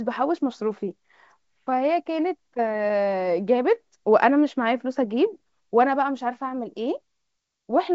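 No technical faults are audible.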